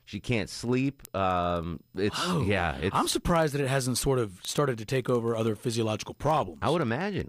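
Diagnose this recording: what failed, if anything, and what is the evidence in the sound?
A clocking failure on a digital link into the converter stage: word clock ticks. Through the speech, from 0.16 s to 7.27 s, sharp ticks of uneven strength recur about every 70 ms, around a hundred in all. The receiver runs on its own clock, off by roughly 300 ppm, so one sample slips at each crossing. Buffer underruns would leave audible gaps at irregular times; these are single-sample clicks at a fixed rate.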